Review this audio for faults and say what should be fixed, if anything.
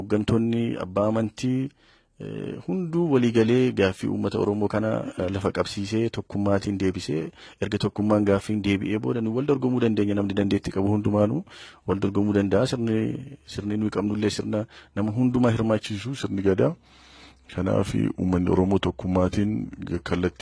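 From 15.84 s to the end, a wrong sample rate slows the sound to 0.919 speed and lowers pitch 1.47 semitones, consistent with 24 kHz material played at 22 kHz. Prevent it by resampling to the output rate or declaring the stream's true rate to the player.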